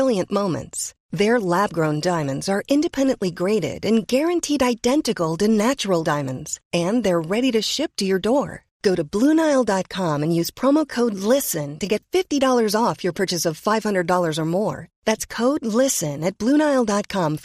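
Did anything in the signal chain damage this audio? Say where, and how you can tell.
Yes. MP2 compression damage runs through the whole speech clip, with a dull top end and a gurgling, granular texture. This likely comes from the codec stage: MPEG Layer II starving its upper sub-bands of bits, which fits a low rate around 80 kbps.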